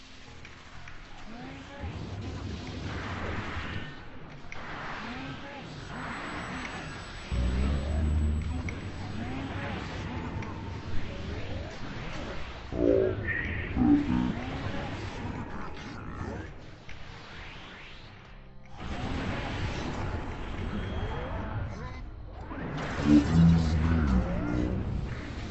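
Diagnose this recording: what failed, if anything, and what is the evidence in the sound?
Wrong sample rate, present from start to finish at the playback stage. Everything runs at half speed and sits a full octave low, 12 semitones down, with tempo and pitch dropping together by the same ratio. That locked pairing means the samples were clocked out more slowly than they were captured, with no rate conversion. A factor of exactly 0.5 fits material recorded at 44.1 kHz being played back at about 22 kHz.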